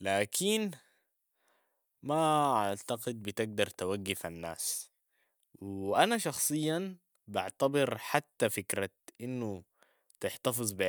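Nothing goes wrong anywhere in this bit of speech; there's simply no technical fault to point to from the first moment to the last.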